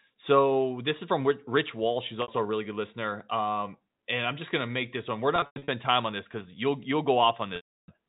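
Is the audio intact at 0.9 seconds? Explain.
Yes, at 0.9 seconds the audio is intact, with the speech carried cleanly through G.711 telephone coding and no fault at that moment.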